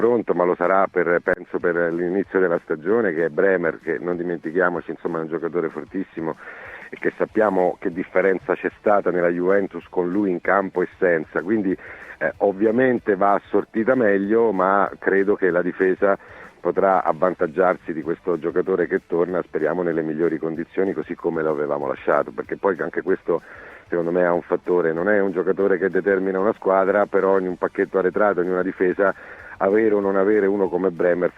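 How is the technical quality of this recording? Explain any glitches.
No glitches or faults detected.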